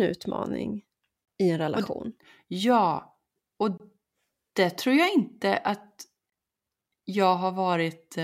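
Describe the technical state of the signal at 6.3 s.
At 6.30 to 6.32 s a gap between chunks leaves a 23 ms silent hole between the 2.5 s chunks, interrupting the speech without losing any.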